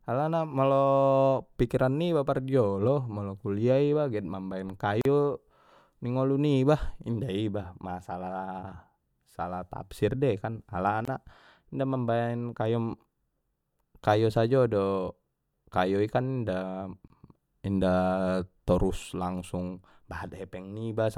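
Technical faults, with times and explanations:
5.01–5.05 s, 11.05–11.08 s and 17.08–17.10 s, gap at a join of encoded pieces: the speech drops to silence for 38, 24 and 24 ms, every six seconds, with smeared edges, then resumes where it stopped, because pieces encoded separately kept their start delay and end padding when joined.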